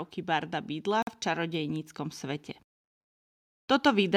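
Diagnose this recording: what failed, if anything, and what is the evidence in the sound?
Automatic gain rising in the call-processing stage: the gain control judged the input too quiet and raised its gain step by step rather than all at once. From 0.26 s to about 2.51 s the speech and the background noise beneath it swell together by about 4 dB. That shared rise points to a gain stage acting on the whole signal, since a talker simply moving closer would lift the speech more than the room behind it.

A Bluetooth stall on the wireless playback link is the likely cause of a hard gap from 1.02 s to 1.07 s. For about 48 ms the speech drops to silence and then resumes, with no fade either side. This fits retransmitted packets arriving late so that the headphone buffer empties and playback pauses. The gap falls inside the gain swell and does not interrupt it, which places the fault downstream of the call processing.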